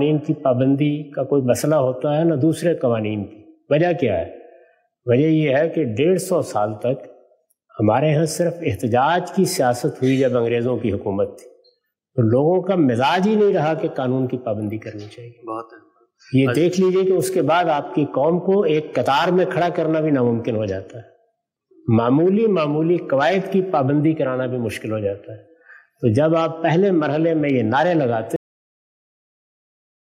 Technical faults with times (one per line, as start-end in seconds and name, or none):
28.36-30.09 cut-off end